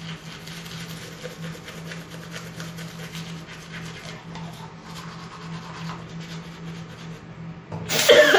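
Heavy MP3 compression, likely at a bitrate around 64 kbps, starves this everyday-sound recording of bits throughout, leaving a plainly audible watery swirl with smeared attacks.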